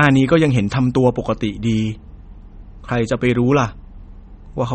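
Throughout the speech, nothing is heard above 8.4 kHz, and the sound is plainly watery and swirly. The likely cause is MP3 compression starved of bits, pointing to a bitrate near 33 kbps. The encoder cuts the treble and flickers weak frequency lines on and off.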